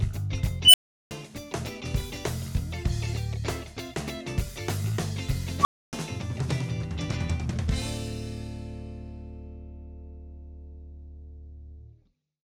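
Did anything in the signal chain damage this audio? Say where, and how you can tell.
Yes. An unstable filter in a digital processing stage, most plausibly a recursive equaliser or filter inside call or effects processing, fails twice. From 0.65 to 1.11 s, a tone around 3 kHz swells over about 88 ms into clipping, then drops into roughly 0.37 s of silence. At 5.61 to 5.93 s, a tone near 1 kHz builds in about 40 ms and is followed by about 0.28 s of silence. Bad coefficients let feedback grow until the values overflow and the filter resets.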